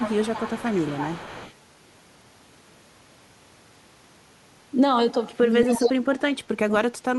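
From 0.0 to 1.54 s there is echo leak: a copy of the speech trails it by 238 ms, about 10 dB lower, most likely because a far-end loudspeaker's echo canceller let residual pickup back into the return path. The echo recurs from 5.65 to 5.89 s at roughly the same level as the speech itself. Speech suppressed in double talk appears at 0.94 to 1.07 s as a brief dip of about 10 dB. From 5.63 s to the end it becomes a much deeper cut of about 30 dB. Both dips are likely the canceller attenuating the near talker while it cannot separate that talker from the echo.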